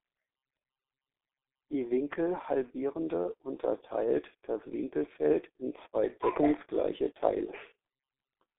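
The whole clip runs through the G.723.1 codec, with heavy damage: the speech sounds muffled and hoarse, consonants smear, and nothing above 3.7 kHz survives. That slow, coarse frame-by-frame smearing sets it apart from a clean 300 Hz to 3.5 kHz telephone band, and fits a 6.3 kbit/s stream.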